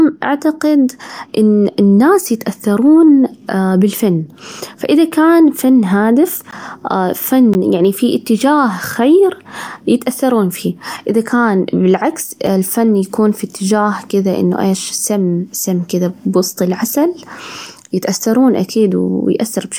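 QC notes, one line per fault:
6.51 s, block of digital silence: a 15 ms dropout right after "فإذا كان فن هادف"; the signal jumps to zero and back with no fade, leaving a short hole.
7.54 s, block of digital silence: another 15 ms gap just before "يعني في", likely from the output buffer not being filled in time.
12.47 s, block of digital silence: a 5 ms gap between "فيه إذا كان بالعكس" and "الفن يكون في إتجاه", short enough to register as a single tick.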